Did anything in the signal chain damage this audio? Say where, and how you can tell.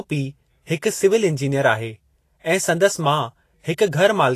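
Yes, at the codec stage, throughout the speech. Nothing comes through above 14.2 kHz, and the treble just below that edge is hissy and grainy, with roughened tones and softened consonant attacks. This is likely Vorbis compression at a low setting, which fits a bitrate near 33 kbps. The codec quantised the high-frequency detail so coarsely that it became noise of similar energy. Unlike analogue hiss, this grain follows the signal and stops at a hard cut-off.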